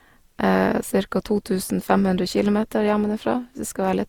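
From start to finish the speech has a swirly, smeared, hollow quality with softened consonant attacks, more than a single encode at around 64 kbit/s with an Opus-like codec would give. That's likely generation loss, re-encoded roughly seven times, each pass re-quantising on a new frame grid.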